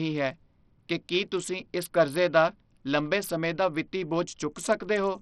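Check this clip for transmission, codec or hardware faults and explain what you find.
One codec fault runs through the whole clip. Throughout, the speech sounds like likely Bluetooth SBC compression: nothing above 14.5 kHz, flickering treble and gritty quantisation noise. This points to a starved bit pool near 64 kbps.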